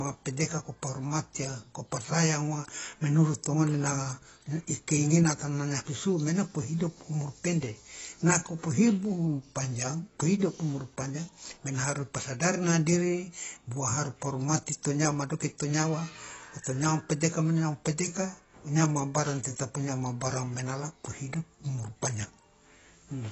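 Speech, with AAC compression damage running through the whole clip: nothing is left above 8 kHz, so sibilants turn dull, and the remaining band sounds smeared, with a warbling, fizzy texture on sustained vowels and on s sounds. A plain low-pass filter would remove the top just as cleanly but leave the rest intact. Here the watery, patchy spectrum points to a low-bitrate AAC-LC encode, likely around 24 kbps.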